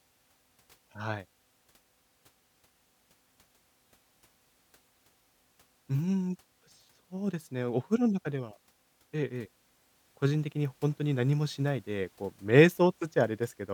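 Speech recording with no audible technical faults.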